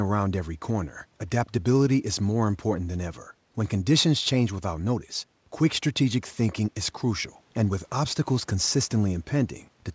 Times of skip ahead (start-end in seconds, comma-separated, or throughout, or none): none